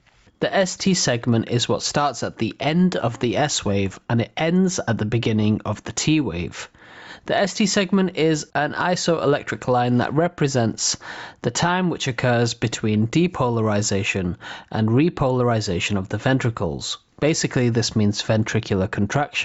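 Throughout, the input gain was likely set far too high, so a fast limiter clamps down on each loud sound, with the gain swinging by about 10 dB, giving audible gain pumping. The top end stops near 8 kHz, which fits the call's Opus path.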